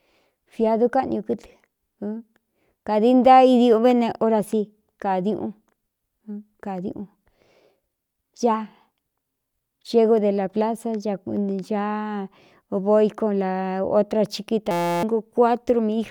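From 14.71 to 15.03 s a steady 172 Hz buzz replaces the speech: a system hang loop, the hardware replaying one 5.8 ms buffer, likely 256 samples, while the system froze.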